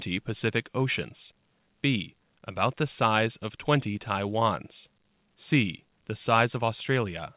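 Speech carried over a WebRTC call path, its content stopping at 4 kHz as a narrowband call codec such as G.711 would leave it, with nothing wrong to report.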